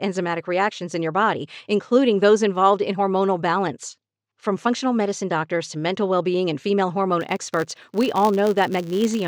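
From 7.21 s, after "being and female hormone", a filter restarted on every block clicks at block boundaries. The result is a 100 Hz buzz tracking level until the end.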